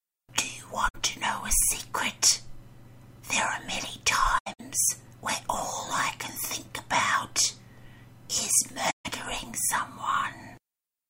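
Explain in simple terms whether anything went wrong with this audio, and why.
Sound briefly vanishes three times: 0.88 to 0.95 s, 4.38 to 4.60 s, and 8.90 to 9.06 s. This is AAC frame loss with muting. Chunks of compressed audio went missing and were replaced by silence. Each gap fades softly in and out. The middle one is broken into separate holes.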